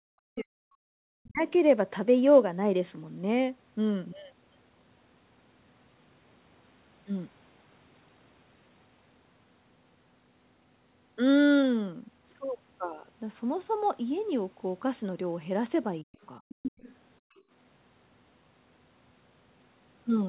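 From 0.00 to 1.41 s the speech is suppressed in double talk. The talker's level drops by as much as roughly 40 dB, over about one and a half seconds. The voice dips and breaks up. The echo canceller was likely hearing both sides at once. It could not tell the talker from the loudspeaker echo, so it turned everything down.

From 1.48 to 1.58 s the other side's voice leaks through. It sits about 35 dB below the speech. It is a faint scrap of a second voice. The echo canceller likely left some of the loudspeaker signal in the microphone.

From 16.02 to 16.19 s the speech is suppressed in double talk again, for only a brief moment. The drop reaches roughly 40 dB. The talker briefly cuts out, likely because the canceller clamped down while both sides were active.

Leakage follows at 16.22 to 16.26 s, about 40 dB down. It is barely there.

From 16.47 to 16.57 s the background is gated by the echo canceller. 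For about 40 ms the room sound falls by about 40 dB, then returns. Starting within that stretch, from 16.49 to 16.95 s, the other side's voice leaks through much more strongly. It is only about 10 dB below the speech. That is a clear second voice, likely residual echo the canceller missed.

From 17.20 to 17.45 s the background is gated again. The room tone drops about 39 dB for roughly a fifth of a second. The canceller clamped down hard while the loudspeaker played. Inside that window, at 17.36 to 17.42 s, a faint scrap of the far voice leaks through, about 35 dB down. That is likely leftover echo.

Throughout, nothing is heard above 4 kHz. This points to a narrowband call codec.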